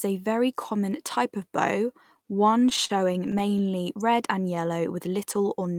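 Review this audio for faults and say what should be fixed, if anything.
Packets reached the receiver late or too slowly between 2.51 and 3.74 s, so the jitter buffer ran dry thirteen times. Each gap, the longest 39 ms, was filled by stretching the preceding sound, adding about 160 ms. Nothing is lost, but the speech drags with repeated stalls (stutter). A larger or adaptive jitter buffer, along with steadier network delivery, would prevent it.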